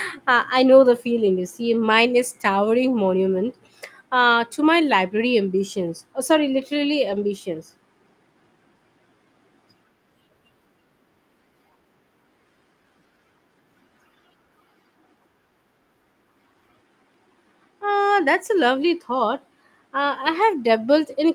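A lost packet rebuilt from error correction occurs at 7.11 to 7.21 s, just after "sorry literally". Packets went missing in transit, and the decoder filled the hole with the lower-bitrate backup copies carried inside the following packets, so the speech continues without a gap. About 60 ms of audio comes from those copies, which fits around three 20 ms packets, and that stretch sounds rougher and noisier than the surrounding speech.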